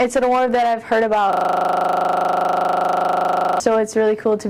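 From 1.33 s to 3.6 s a system hang loop takes over: the machine froze while the sound hardware kept replaying one 40 ms buffer slice 57 times. At 25 Hz it buzzes steadily at the loop rate. The waveform shows identical tiled blocks, the spectrogram evenly spaced vertical stripes.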